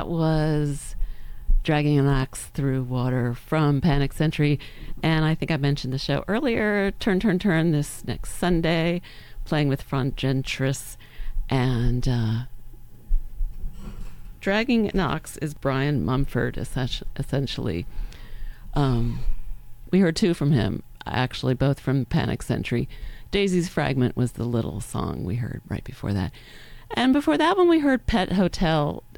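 At 11.10 s and again at 15.56 s there is a repeated buffer. New audio failed to arrive in time, so the same tiny slice, about 1.45 ms long, which fits a 64-sample buffer, was played again: three extra times at 11.10 s and twice at 15.56 s. Each repeat joins hard to the last, so the sound briefly turns into a click or short buzz, and a few milliseconds of audio go missing. On the waveform this shows as a short run of identical cycles with a sharp step at each join. On a spectrogram it appears as a thin vertical line of broadband energy.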